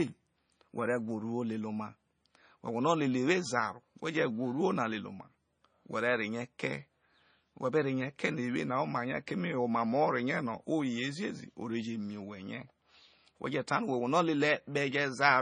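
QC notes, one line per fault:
throughout, MP3 compression: the speech has nothing above 9.3 kHz and carries heavy codec damage, with a watery, swirling texture and metallic chirps on s sounds as weak frequency detail drops in and out between frames. This is likely MP3 encoding starved of bits, which fits a rate near 25 kbps. A plain low-pass filter would dull the top end cleanly, without the swirl and chirping.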